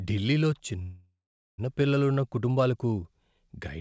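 At 0.82 s a call audio freeze begins. A fading fill sound replaces the speech, then gives way to 410 ms of silence. At 1.6 s the speech resumes where it stopped, with nothing lost. The likely cause is delayed packets emptying the jitter buffer.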